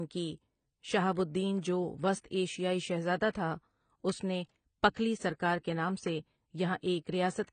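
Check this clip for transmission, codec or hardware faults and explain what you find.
Two kinds of fault are audible: codec damage through the whole speech recording, and two short bursts of pre-echo.

AAC compression is heard from start to finish. Nothing remains above 9 kHz, and the damage is plainly audible: the speech sounds dull and smeared, with a fizzy, warbling edge on sibilants. The likely cause is AAC-LC encoding at a low bitrate, around 24 kbps. At that rate the encoder lowers its cut-off and starves quiet spectral detail of bits.

Pre-echo appears from 3.30 to 3.35 s, just after "جو وسط ایشیائی شہزادہ" and before "تھا اس نے پکھلی", and again from 6.81 to 6.83 s. A transform codec spreads its quantisation noise across the whole block. Where a sharp onset sits late in that block, noise sized for the loud part leaks into the quiet instant before it, here by 48 ms and 22 ms. Each onset is heard with a brief hiss in front of it and a softened, smeared attack.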